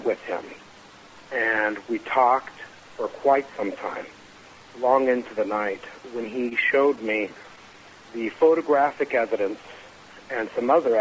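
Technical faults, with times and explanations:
6.36 to 7.77 s, scattered short gaps: About ten packets went missing or arrived too late across this stretch. The receiver filled each hole by stretching out the sound just before it. That patching covers roughly a tenth of a second in all, with no single gap much past 30 ms. So the sound keeps flowing but picks up brief ticks, smears and hiccups. The band stays capped near 8 kHz, which fits a G.722 call path.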